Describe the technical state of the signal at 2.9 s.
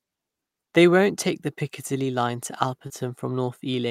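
At 2.9 s there is a short concealed packet loss, spanning 2.87 to 2.92 s. About 20 ms of speech never arrived, and the decoder bridged the gap with roughly 24 ms of extrapolated signal before crossfading back, heard as a brief smear or wobble.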